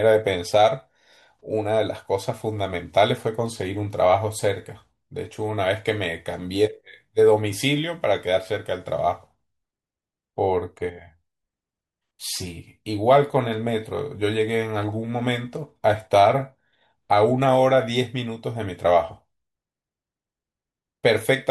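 Nothing in this bit of speech stands out as a technical fault, so there's nothing here to point to at any moment.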